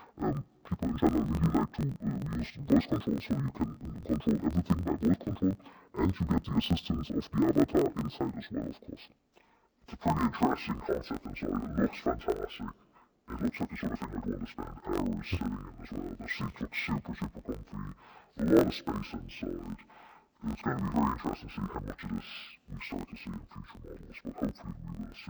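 From start to finish the audio suffers from interleaved audio read as planar. Each block of about 21.8 ms holds alternating left and right samples, but the first half is taken as the left channel and the second half as the right, so each channel plays its share at half speed. The result sits an octave low, doubled and choppy, with a buzz at about 46 Hz from the block boundaries. Unlike a plain sample-rate mismatch, the overall pace stays correct despite the octave drop.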